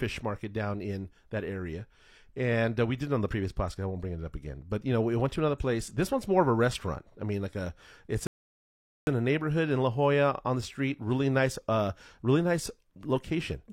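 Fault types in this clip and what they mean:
rebuffering stall: the player used up its downloaded audio and paused until more data arrived. The speech cuts to silence after "mean like a it's" at 8.27 s, then resumes exactly where it stopped with "in a neighborhood in" at 9.07 s. No speech is lost, but about 0.8 s is added.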